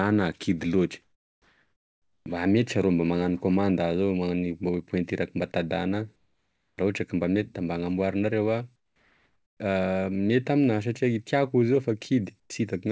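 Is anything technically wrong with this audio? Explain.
Yes. The speech has two related faults, both tied to silence handling on a call link whose band stops at 8 kHz, which fits a G.722 wideband codec.

Comfort noise in place of the background appears four times: 1.02–2.26 s (1.24 s, about 12 dB quieter), 6.16–6.78 s (about 6 dB down), 8.76–9.60 s (about 4 dB down), and 12.40–12.50 s, right after "i tiako izy io" (about 8 dB down). The likely cause is discontinuous transmission: during pauses the sender went quiet and the receiver generated roughly matched synthetic noise. The real room tone turns into a flat, featureless hiss that dips in level.

An onset clipped by the voice detector occurs at 2.19–2.26 s, cutting about 70 ms just before "mba mety arô mba". The detector was likely slow to register that sound had resumed, so those opening moments were never sent, and comfort noise filled the gap. 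The phrase therefore bursts in abruptly, missing its soft lead-in.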